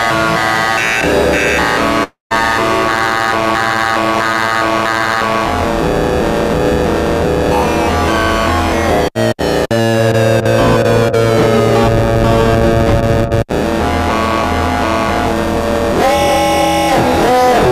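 At 2.03 s the sound smears into a fading buzz, drops to near silence, and resumes at 2.33 s with about 280 ms of material gone. This is likely a long network dropout, where the receiver padded the missing stretch before audio arrived again.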